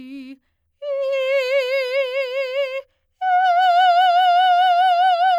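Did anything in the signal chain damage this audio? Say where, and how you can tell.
No, nothing in the signal chain audibly damaged this music: the signal sounds continuous and intact at every stage from capture to playback.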